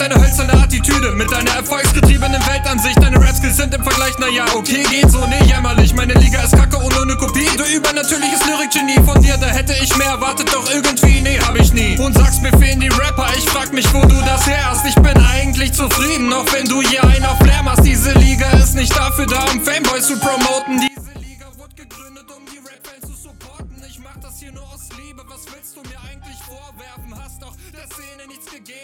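From 20.88 s to the end, summed to mono the sound drops about 23 dB to a faint copy, likely one channel inverted, so everything shared cancels out.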